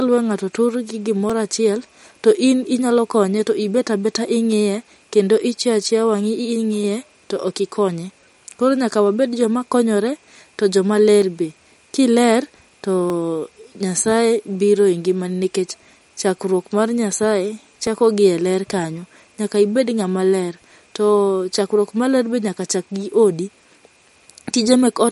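Throughout the speech, MP3 compression is plainly audible: s sounds turn watery and swirly as weak frequency lines flicker between frames, which points to a low bitrate near 50 kbps. Unlike simple low-pass filtering, the damage shimmers and smears attacks.

Single sharp clicks at 1.30, 5.83, 11.22, 13.10 and 17.87 s are likely dropped samples, each under a millisecond lost, so the waveform jumps abruptly. Unlike a dropout, no sound goes missing; each is one thin click.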